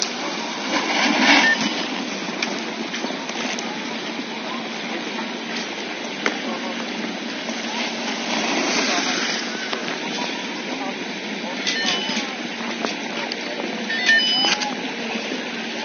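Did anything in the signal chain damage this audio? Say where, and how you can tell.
No, there's nothing here that points to damage anywhere along the chain, so you can relax about this one.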